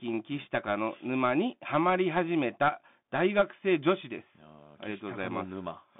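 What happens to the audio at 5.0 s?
At 5.0 s the speech is still passing through a Bluetooth CVSD headset codec, which runs through the whole clip. The coder sends one bit per sample saying only up or down and adapts its step size, which fits a 64 kbps stream. The band is squeezed to roughly 150 Hz to 3.6 kHz, so the speech sounds thin. Fast, loud high content outruns the step and distorts, s sounds turn scratchy, and a granular hiss sits underneath.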